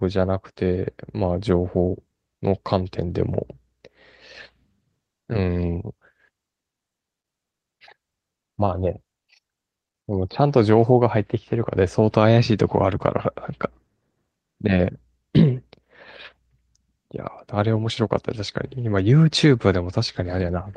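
No technical faults can be heard in this recording.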